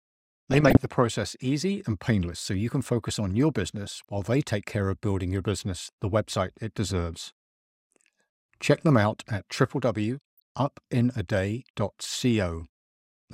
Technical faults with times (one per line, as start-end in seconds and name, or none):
0.51-0.86 DAB burbling
3.83-4.26 DAB burbling